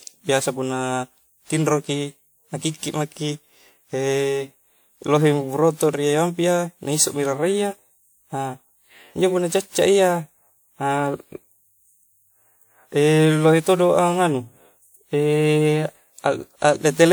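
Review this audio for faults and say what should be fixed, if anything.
Generation loss runs throughout the speech. It sounds swirly, smeared and hollow, with blurred consonant attacks, more than a single pass at this quality would explain. The likely cause is the audio being decoded and re-encoded about four times through a lossy codec, which fits WMA at around 96 kbit/s. Each pass quantises again on a shifted frame grid, so noise piles up even though content still reaches 20.1 kHz. To prevent it, keep a lossless master and encode to the lossy format only once, at the final delivery step.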